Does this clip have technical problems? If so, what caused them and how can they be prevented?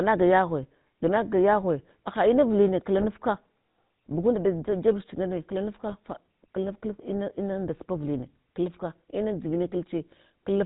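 Yes. Throughout the recording the speech has a buzzy, gravelly roughness, with nothing above 4 kHz, which is the sound of the GSM full-rate codec and fits its 13 kbps mode. The codec sends only a compact model of the vocal tract plus a thinned-out pulse excitation that keeps every third sample, so the fine structure of the voice is rebuilt coarsely and the top of the band is discarded. Preventing this means recording or transmitting over a wideband path, such as a wideband or VoIP codec, rather than a legacy GSM full-rate channel.

Two short bursts of squawking and gargling break through, from 2.98 to 3.05 s right after "ganagaka yaghine haha inavuline", and from 5.88 to 5.95 s between "jebuch angane" and "fa klanaft klaf". These are GSM bit errors. On a weak radio link, corrupted bits reached the decoder and scrambled the filter, pitch and gain parameters, distorting the spectrum and level. 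Each burst lasts under 70 ms, which points to roughly three damaged frames. A stronger signal or better error protection on the link would prevent these corrupted frames.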